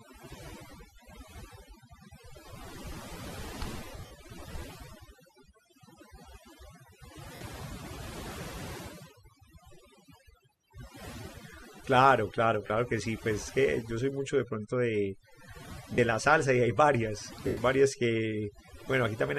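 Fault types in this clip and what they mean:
overdone noise removal: Present for the full length of the speech. The noise suppressor is set too aggressive, so it pulls individual frequency bands far down or mutes them whenever their level sits close to its noise estimate, and the weaker parts of the voice are removed along with the noise. Between phrases the background drops and breaks up into twinkling specks.
lost LE Audio frames: Five short dropouts, at 3.97–4.11 s, 7.35 s, 12.67 s, 15.94 s and 17.47–17.57 s, lasting about 100, 60, 30, 40 and 100 ms. The first is broken into several gaps across 140 ms, the longest about 50 ms. The timing fits 10 ms frames. For each missing frame the LC3 decoder repeats the previous spectrum with randomised signs, so the voice briefly turns into a noisy smear.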